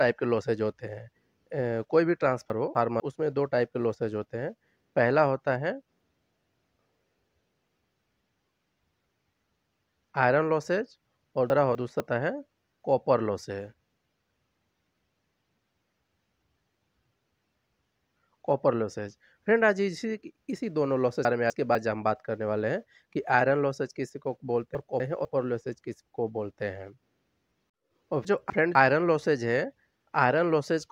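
The audio has chunks out of order at five points: 2.5–3.0 s, 11.5–12.0 s, 21.25–21.75 s, 24.75–25.25 s and 28.25–28.75 s. Each time, a 250 ms block arrives one block late and plays after the block that should follow it, so two adjacent pieces swap places. That gives a brief jumbled stretch with three hard joins. Unlike a dropout or a repeated block, there is no silence, missing material or duplication, only reordering.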